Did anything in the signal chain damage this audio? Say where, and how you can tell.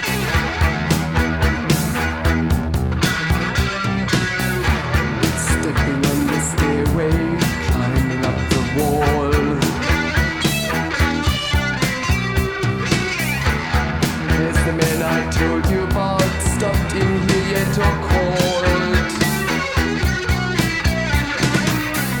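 Yes. Clock drift between sender and receiver runs through the whole clip, at the network and jitter-buffer stage. The sender's audio clock runs roughly 4 percent fast against the receiver's, so samples arrive quicker than they are played out and the jitter buffer keeps filling. The receiver has to keep discarding short pieces to hold its delay steady. That shows up as small, unevenly spaced timing hiccups across the sound instead of one clean break.

Repeated timing corrections are clearest from 1.29 s to 3.96 s, where the sound moves at about 103 percent of its proper speed. Because the sender is fast, the receiver trims short slices of audio to drain the surplus, always in the same direction but at irregular gaps. Each cut is tiny, so the stretch comes across as a slightly rushed, unsteady tempo with faint stumbles, not as obvious dropouts.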